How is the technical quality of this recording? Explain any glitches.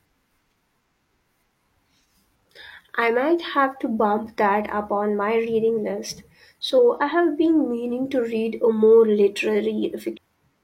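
One glitch stands out near the end of the speech. At 10.13 to 10.18 s the sound jumps abruptly forward with a small blip, likely a stream segment skipped: one chunk failed to load, so playback continued from the next.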